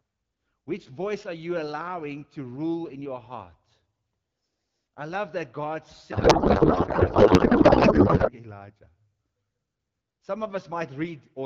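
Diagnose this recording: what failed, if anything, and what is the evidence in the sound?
Codec stage: a codec payload misread from 6.11 to 8.33 s, where the speech turns into garbled noise and warble that barely follows it. Octet-aligned AMR was unpacked as bandwidth-efficient, shifting every field. Unlike packet loss, nothing drops out; decoding continues, just wrongly.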